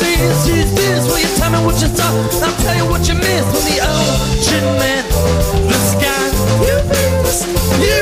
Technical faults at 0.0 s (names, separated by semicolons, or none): none